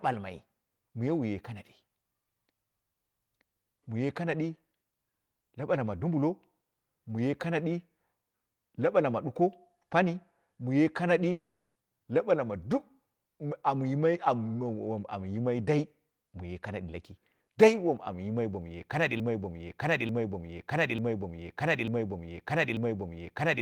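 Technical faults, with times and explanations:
11.31–11.77 s, long network dropout: Speech stops for about 0.44 s and that stretch never returns. A brief fading buzz continues the last sound, then roughly 0.36 s of near silence follows. This likely comes from packets failing to arrive, with the receiver covering the gap.
19.20 s to the end, broken-record loop: Right after "amyimai bomuye kanadi", a 0.89 s fragment repeats exactly, back to back, five times until the clip ends. The speech that belonged there is lost. This is likely a stalled player or stream resending its last buffered piece.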